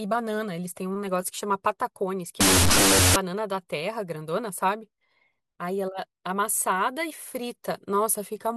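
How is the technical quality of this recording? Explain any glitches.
The recording has one clear glitch, a burst of wrong sample width from 2.41 to 3.16 s. The audio sounds like it was stored as 32-bit float and read as 16-bit integers. Each float is split into two mismatched values, so the speech plays at half speed, an octave low, beneath loud noise. The waveform shows a dense noisy block, and the spectrogram shows broadband hash there.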